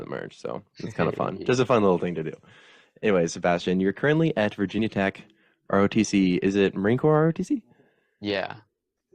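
At 4.78 s, 6.04 s and 7.47 s the speech jumps ahead as compressed frames are skipped: roughly 40 ms, then about 20 ms twice, fitting whole frames of 21.3 ms. Each join shows as a seam on a spectrogram.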